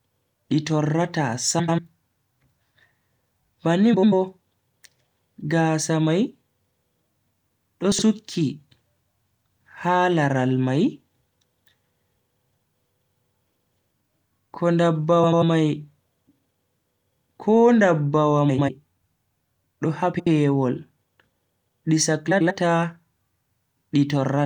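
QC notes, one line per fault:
1.59–1.79 s (after "di torrata"), 3.93–4.13 s, 7.92–8.03 s, 12.39–12.52 s, 15.23–15.43 s, 18.49–18.69 s, 20.13–20.27 s (after "do ha"), 22.31–22.51 s: frames out of order. Each stretch is two adjacent runs of frames that were swapped before decoding, so the later half plays first. Blocks are mostly about 93 ms, which fits runs of four frames. The shorter cases are 19 ms, 70 ms and 83 ms. The result is a brief garbled flutter. The timing is unchanged.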